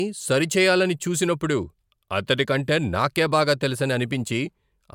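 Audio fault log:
No faults detected: the speech signal stays continuous and intact across the clip, with unbroken timing.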